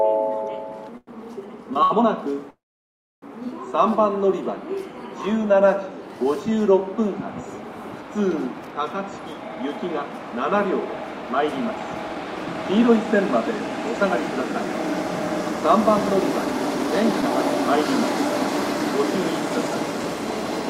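At 0.97 to 1.24 s and again at 1.83 to 1.92 s, a packet arrives late and the jitter buffer runs dry, giving a short stall from a late packet. The receiver holds the last sound for about 98 ms and then 70 ms, so it lingers with a faint buzz before carrying on with nothing lost.

From 2.50 to 3.24 s there is a call audio freeze, likely caused by packets held up in transit while the buffer stays empty. About 0.72 s is inserted: the held sound fades quickly and roughly 0.65 s of silence follows before the audio resumes where it stopped.

Between 8.96 and 14.33 s the buffer is holding surplus audio, so a jitter buffer speed-up trims repeated pitch-period slices, around 0.4 s in total. The sound runs at 107% speed without a change in pitch and feels hurried. A milder pass from 15.04 to 16.50 s removes a few hundredths of a second and runs at 103%.

At 17.22 to 17.24 s there is a short concealed packet loss: 20 ms fails to reach the decoder in time. 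The receiver extends the preceding sound for about 5 ms and blends back in, leaving a brief smear or wobble.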